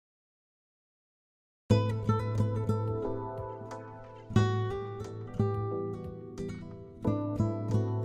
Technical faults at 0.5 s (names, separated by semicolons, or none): cut-off start